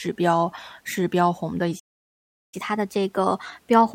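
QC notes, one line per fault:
1.79–2.54 s, playback stall: the speech drops to silence for about 0.73 s; likely the player ran out of data or its thread blocked.
2.54 s to end, catch-up at higher speed: speech runs 1.1 times fast and roughly a semitone and a half sharp as resampling wins back some of the lost time.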